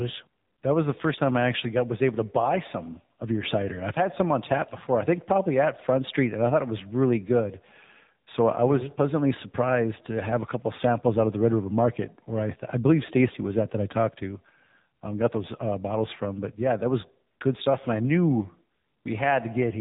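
From start to finish the speech carries the sound of the AMR narrowband mobile codec. Nothing gets through above about 3.8 kHz, so everything sounds boxed-in and phone-like. The damage is plainly audible, buzzy and a bit synthetic, which fits a low rate around 7.4 kbps.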